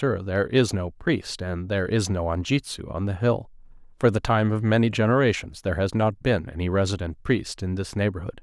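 No technical faults can be heard anywhere in the speech.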